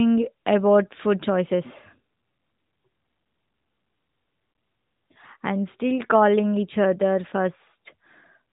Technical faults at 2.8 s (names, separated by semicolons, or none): none